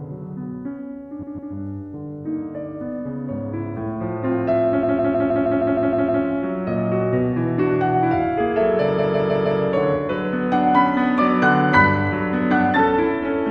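At 1.22 to 1.53 s, 4.82 to 6.23 s and 8.98 to 9.60 s the sound stutters with repeated frames. The same block of about 157 ms, which fits a run of six compressed frames, was stored or sent again, so it plays two, nine and then four extra times, adding 0.31, 1.41 and 0.63 s. Unlike a dropout or packet-loss concealment, nothing goes missing or smears. Identical material simply loops and delays what follows.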